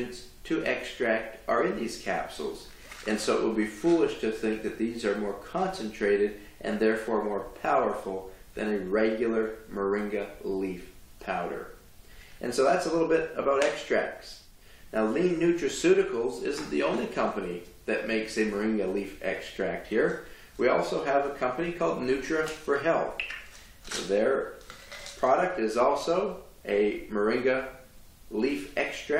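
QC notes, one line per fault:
No faults turned up anywhere in this one, so there's nothing here that needs flagging.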